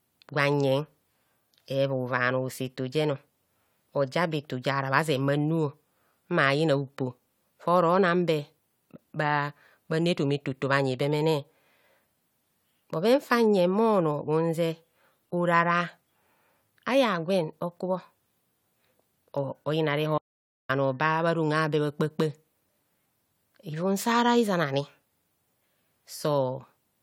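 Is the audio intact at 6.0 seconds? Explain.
Yes, the speech at 6.0 seconds plays through cleanly, with no dropout, click, distortion or other fault at that point.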